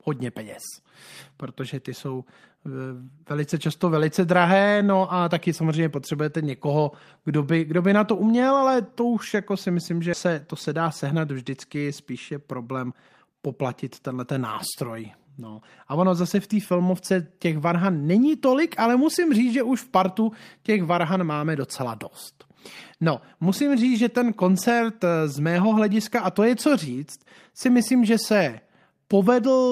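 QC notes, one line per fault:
10.73–11.11 s, jitter buffer speed-up: after "to se" and up to "vždycky spíš je problém", the speech runs about 8 percent fast at unchanged pitch. Excess audio had built up in the receive buffer, and to drain it the receiver trimmed short pitch-period-length slices in quick succession, roughly 40 ms in total. Because whole cycles are dropped rather than resampled, the voice keeps its pitch but the syllables arrive compressed, giving a brief hurried quality.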